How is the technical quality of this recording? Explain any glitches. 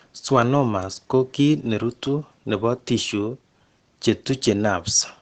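The recording has clear codec damage throughout: it sounds like heavy Opus compression. The encoder appears to have run short of bits, which fits a low bitrate around 16 kbps, and likely switched to its speech-oriented SILK mode at wideband. That mode models the voice sparsely and discards the top of the spectrum, so nothing is heard above about 8.9 kHz. The speech comes out muffled and hoarse for the whole clip, with the codec artefacts plainly audible.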